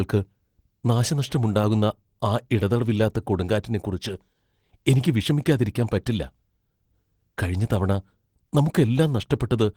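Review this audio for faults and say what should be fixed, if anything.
Throughout the speech, the voice has a hoarse, slightly robotic grain with a rough, buzzy texture in place of a clean tone. This is plainly audible Opus voice compression. Content reaches past 20 kHz, so the band was not narrowed. Instead the codec ran in hybrid mode, with the linear-prediction layer handling the lower band and a transform layer above 8 kHz. The excitation was coded coarsely, which fits a low bitrate of around 16 kbps. To prevent it, encode at a higher bitrate or keep a lossless master.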